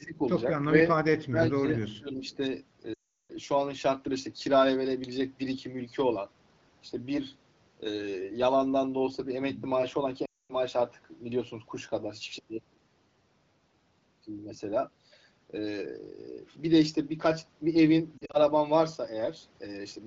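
From 0.0 to 0.19 s, 1.29 to 1.66 s and 1.94 to 2.24 s, the speech sinks by about 10 to 20 dB. This is likely speech suppressed in double talk, with the echo canceller ducking the talker along with the far-end echo. The level drops rather than the sound smearing.

At 2.30 to 2.37 s, a faint copy of the speech arrives 405 ms late, at about 35 dB below the speech: likely a brief echo leak. It is a delayed repeat, not a loss of level.

Lost AMR speech frames follow at 2.93 to 3.31 s (360 ms) and 10.26 to 10.54 s (240 ms). The sound drops to near silence within two frames, as wideband concealment does. Around 18.17 to 18.40 s, shorter scattered gaps, none longer than 40 ms, give quick warbles instead. The clear 12.65 kbit/s AMR-WB band stays audible around them.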